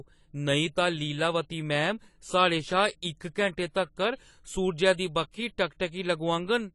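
Across the whole speech clip the top end stops dead at about 11.4 kHz, and what remains sounds dull and smeared, with a warbling, fizzy grain on sibilants and held vowels. This is most likely AAC compression (AAC-LC) at a low rate, consistent with around 32 kbps. The encoder discards spectral detail it judges inaudible, leaving holes between bands and a lowered cut-off. The warbling and holes set it apart from a simple low-pass filter, which would sound cleanly muffled.

Pre-echo appears twice, at 4.93 s and at 5.31 s. Each time a short hiss rises just ahead of a sharp attack, lasting 55 ms on the first and 26 ms on the second, and the attack itself lands softened. The codec spreads its quantisation noise across a whole transform block, so the noise meant for the loud onset bleeds into the quiet moment before it. Because the hiss comes before the transient, this differs from reverb or ringing, which trail after it.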